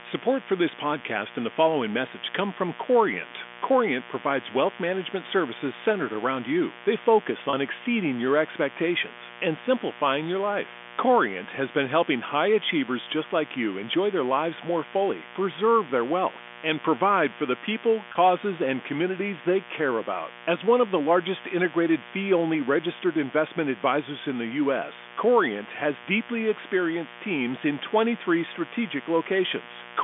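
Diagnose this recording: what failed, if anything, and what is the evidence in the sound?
A 60 Hz mains buzz runs under the whole recording, a steady raspy layer roughly 20 dB below the speech. That points to the analogue wiring: a dimmer, a rectifier or a poor shield is letting sharp switching spikes in twice per mains cycle, so the buzz carries a long ladder of 60 Hz harmonics well up into the kilohertz range. The narrow telephone band (about 250 Hz to 3.5 kHz) trims the lowest harmonics but leaves the rasp audible.

There's packet loss with pitch repetition on the network side, in two places, each a single 30 ms gap. The first runs from 7.50 to 7.53 s, just before "exceeding your expectations and". The second runs from 18.12 to 18.15 s, between "provide for the people" and "and communities they care". Both gaps are short, so the receiver's concealment loops the last pitch period and you hear a brief, slightly held, buzzy sustain rather than silence. 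The speech then picks up again.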